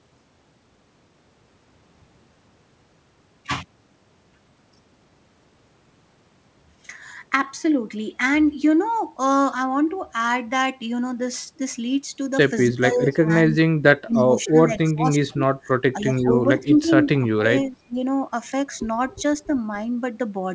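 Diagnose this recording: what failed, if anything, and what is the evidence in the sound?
Speech suppressed in double talk, between 12.67 and 17.96 s. This is a call-processing fault. The speech repeatedly dips and breaks up across this span, for roughly three seconds in total, with the deepest drops about 20 dB down. The likely cause is the echo canceller's double-talk handling. With both ends active at once, it could not tell the near talker from loudspeaker echo, so it attenuated everything it was unsure of, including the wanted speech.

Echo leak, heard as faint delayed copies of the speech at 13.11–13.16, 14.13–14.23, 14.86–14.91 and 16.59–16.90 s. Each copy trails the original by 271 ms. The first two sit about 30 dB below the speech and the last two about 25 dB below. The most likely source is a loudspeaker endpoint whose echo canceller did not fully remove what its microphone picked up, so short residual fragments were sent back down the call path.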